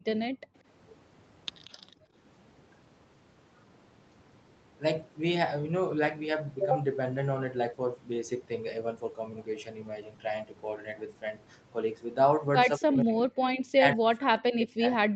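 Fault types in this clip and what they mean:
Background gated by the echo canceller: the room sound is pulled down hard, by about 40 dB at 0.00 s and 0.28–0.55 s, then about 12 dB at 1.77–2.14 s.
Echo leak: a faint delayed copy, about 25 dB below the speech and 184 ms late, at 1.64–1.72 s, likely residual loudspeaker echo passed back.
Speech suppressed in double talk: the voice dips by roughly 30 dB at 12.76–13.24 s and up to roughly 40 dB from 13.68 s, likely the canceller ducking during overlapping talk.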